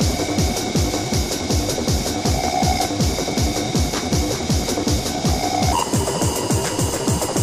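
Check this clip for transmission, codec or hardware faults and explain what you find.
One fault is present, in the closing stretch of the clip. A section at the wrong speed runs from 5.73 s to 7.43 s: that last part plays back 1.31 times faster than it was recorded, most likely because an editor or player fitted it to the wrong clock. Because speed and pitch move together, the sound there turns suddenly hurried and rises by about five semitones, an abrupt jump at 5.73 s that lasts until the audio ends.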